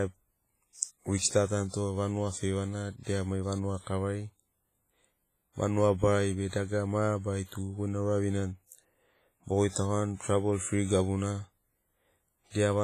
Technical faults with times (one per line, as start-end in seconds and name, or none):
0.00-12.83 WMA compression
0.75-0.79 pre-echo
1.18-1.22 pre-echo
3.03-3.07 pre-echo
3.81-3.87 pre-echo
6.48-6.53 pre-echo